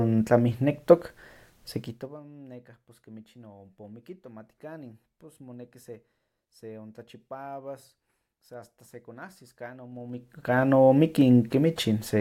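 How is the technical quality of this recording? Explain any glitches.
The recording has zipper noise in two places, where the level moves in audible steps. From 1.75 to 2.23 s the level drops by roughly 25 dB. From 9.9 to 10.64 s, just after "sa asta sekonahsis kan", it rises by about the same amount. The gain changes in 2 dB jumps with no smoothing between them, about 40 steps per second on the way down and 20 on the way up. Each jump puts a tiny click into the speech, so a ticking buzz rides on it while the level moves.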